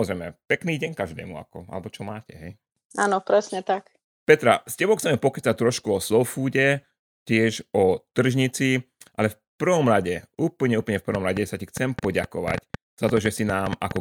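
From 11.15 s to 13.97 s a train of clicks runs over the speech. About twenty sharp, similar pulses arrive unevenly, near 6.4 per second. They peak roughly 10 dB above the speech. Interference from nearby equipment or a faulty connection or power supply is the likely cause.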